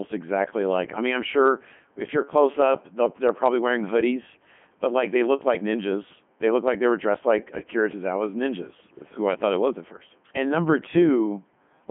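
From start to finish the speech has gone through a Codec 2 vocoder, and it's heavily damaged. The decoder doesn't keep the waveform at all; it rebuilds the voice from sine waves driven by pitch, voicing and energy, so everything comes out robotic and buzzy. The band sits roughly between 150 Hz and 3.4 kHz with nothing above 3.8 kHz, and the quality fits Codec 2's top 3.2 kbit/s mode.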